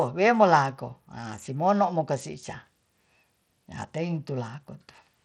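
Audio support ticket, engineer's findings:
Likely Bluetooth SBC compression on the link, present throughout the speech. A starved bit pool leaves the upper sub-bands with few bits and coarsely quantises the rest, so the treble flickers and gritty noise and aliasing sit on the speech. The damage is plainly audible and fits a low bitrate near 80 kbps.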